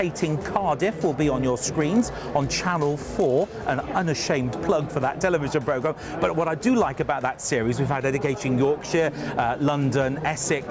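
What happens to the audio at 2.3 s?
At 2.3 s the sound carries a 50 Hz buzz from a resampler restarted on every block, running from 1.64 to 3.82 s. Each block, which fits 20 ms blocks in a conversion down to 16 kHz, is resampled in isolation, leaving an error at every edge. A waveform shows small spikes every 20 ms, and a spectrogram shows thin vertical lines at that spacing wherever signal is present.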